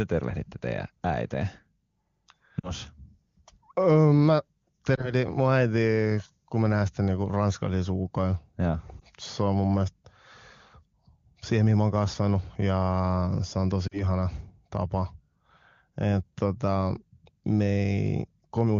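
Lost AMR speech frames at 2.60–2.72 s, 4.96–5.14 s, 9.00–9.04 s and 13.87–14.03 s (after "se on"): corrupted frames made the AMR-WB decoder extrapolate with fading gain. Short warbles or dips follow, about 40 ms lost at 2.60 and 13.87 s, suggesting two 20 ms frames.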